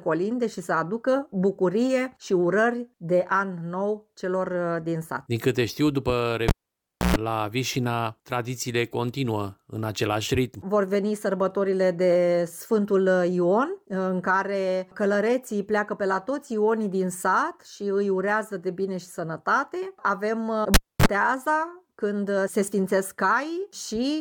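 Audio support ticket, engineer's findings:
Cable pulled and plugged in, 6.48–7.17 s and 20.74–21.06 s: live lead disconnected, tip-only contact on reinsertion. Pop, dropout of 631 ms then 269 ms, mains buzz of 129 ms at 60 Hz then 38 ms at 50 Hz, closing pop.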